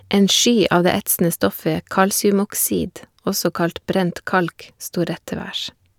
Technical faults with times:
none

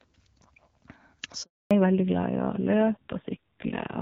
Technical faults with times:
1.43-1.71 handover gap
1.71-4.01 fallback to narrowband

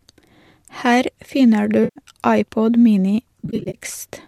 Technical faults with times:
1.83-1.99 AAC frame loss with concealment
3.40-3.78 AAC frame loss with concealment

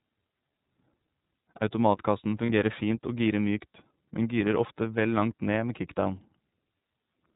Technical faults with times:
0.00-7.36 iLBC codec
2.46-2.49 lost iLBC frames

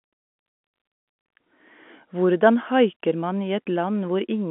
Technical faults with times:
none

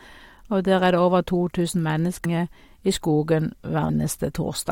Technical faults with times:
2.24 damaged data in a compressed stream
3.88 damaged data in a compressed stream

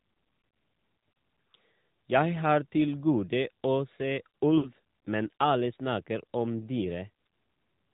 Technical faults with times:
0.00-7.94 AMR narrowband mobile codec
4.58-4.72 lost AMR speech frames
7.54-7.56 lost AMR speech frames

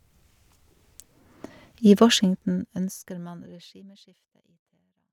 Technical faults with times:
none

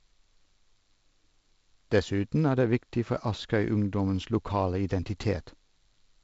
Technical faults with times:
none

